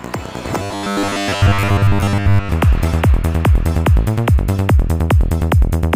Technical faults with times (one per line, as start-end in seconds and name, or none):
0.62-2.49 robotic sound from repeated short buffers